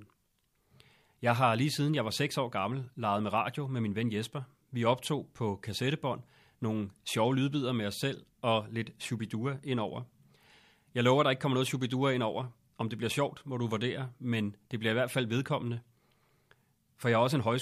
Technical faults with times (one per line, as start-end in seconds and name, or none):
none